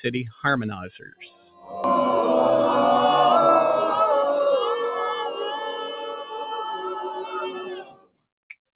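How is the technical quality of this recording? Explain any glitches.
The quality is compromised by a speech-tuned processing chain, and the call path is band-limited, with nothing above 4 kHz, which fits a narrowband G.711 mu-law codec.

Throughout, a noise suppressor applied to music or sounds pumps the level up and down by roughly 10 dB. It treats sustained tones and tails as noise. Unlike a steady codec dulling, the sound audibly breathes, with attacks intact and decays sinking.

From 1.01 to 1.72 s, and again from 5.30 to 8.25 s, the sound is cut by the noise suppressor, dropping by about 17 dB and about 18 dB. Held or fading material sinks far below the surrounding level while sharp onsets survive. This is a deeper dip than the general pumping.

At 1.84 s a skip ahead drops roughly half a second. A stretch of audio was dropped while later audio was already queued, and the two sides were joined with no silence or fill. 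That seamless splice distinguishes it from a dropout, which would leave a gap.

From 3.47 to 4.48 s a jitter buffer speed-up plays the audio at 108% speed by trimming short pitch-period slices, removing about 100 ms in total. Pitch stays unchanged, so the sound feels rushed rather than shifted upward, which separates it from a resampling error.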